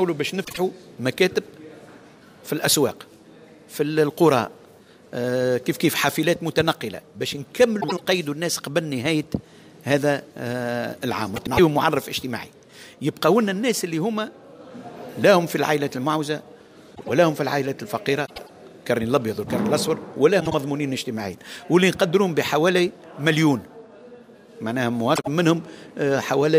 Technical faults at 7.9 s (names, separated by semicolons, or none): frames out of order